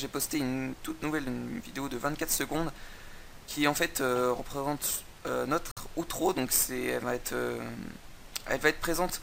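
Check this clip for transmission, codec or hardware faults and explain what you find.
There is one fault: a short dropout that sounds like a Bluetooth stall. From 5.71 to 5.77 s the audio cuts abruptly to about 53 ms of silence, then continues. The likely cause is radio interference delaying packets on the wireless link, so the receiver's buffer emptied and playback halted until the retransmitted data arrived. On a waveform this appears as a flat gap with hard edges; on a spectrogram it is a narrow, fully blank vertical band across all frequencies.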